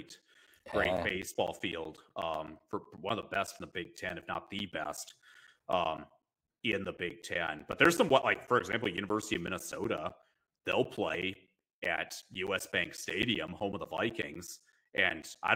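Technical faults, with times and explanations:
0.09 to 15.48 s, periodic USB or driver dropouts: something stalls the audio path every 0.125 s, blanking roughly 10 ms to silence, so the sound ticks steadily.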